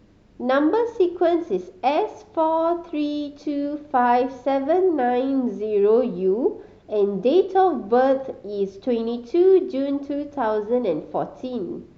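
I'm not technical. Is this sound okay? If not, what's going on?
Yes, this sound is okay, and there's nothing going on that needs fixing.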